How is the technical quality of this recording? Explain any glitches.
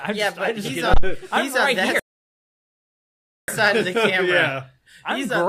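Two clear problems here: a low thump early on and a dead gap partway through.

The first is a phantom power thump from 0.94 to 1.10 s. Someone switched the supply on or off while the input was live, and that sudden voltage step pushed straight through the coupling capacitors into the signal. You hear it as a deep, blunt knock rather than a click, dying away fast, with a decay of about 37 ms.

The second is a rebuffering stall from 1.99 to 3.48 s. The player ran dry of downloaded audio and simply stopped, waiting for more data before carrying on. The sound drops to silence, then picks up exactly where it left off, so nothing's missing. It just costs you about 1.49 s of extra time, and the pause sounds abrupt and out of place.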